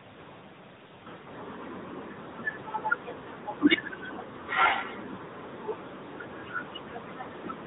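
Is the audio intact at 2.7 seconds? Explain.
No. At 2.7 seconds the speech is passing through the AMR narrowband mobile codec, which affects the whole clip rather than an isolated moment. Nothing above 4 kHz survives, consistent with 8 kHz sampling, so the voice sounds boxed in and dull. The codec rebuilds speech from a vocal-tract model excited by sparse pulses in short subframes, and the damage is plainly audible: a buzzy, synthetic edge that fits a mid-range AMR-NB mode of roughly 10.2 kbps.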